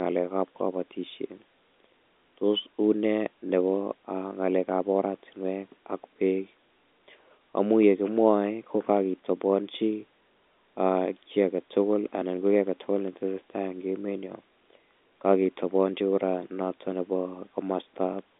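No faults found in this speech.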